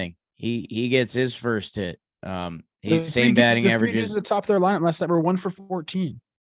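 No faults turn up anywhere in the recording, with no dropouts, clicks, distortion, level jumps or timing breaks to report.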